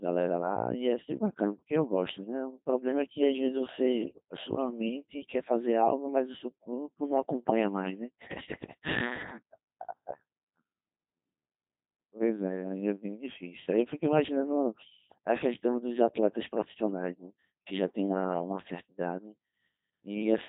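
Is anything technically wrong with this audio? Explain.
Yes. For the whole of this speech clip, the audio has been through the Codec 2 vocoder, and the damage is heavy. The vocoder doesn't keep the waveform at all. It sends only pitch, voicing, loudness and a rough spectral shape, and the decoder rebuilds the speech from sine waves. The result sounds robotic and buzzy, and nothing is heard above 3.8 kHz. The degree of damage fits a rate of about 2.4 kbit/s. A merely band-limited or low-bitrate waveform codec would sound muffled or smeared but still human. Here the voice itself is synthetic.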